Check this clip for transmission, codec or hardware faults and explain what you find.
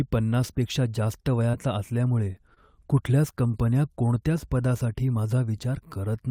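One transmission fault is present. At 2.55–2.58 s, just before "कुठल्याच कंपन्या कोणत्याच पदासाठी", there is a short concealed packet loss. About 20 ms of speech never arrived in time, so the receiver extended the preceding sound and blended back, leaving a brief smear.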